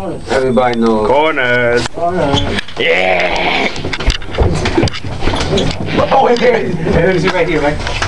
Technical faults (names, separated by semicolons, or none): none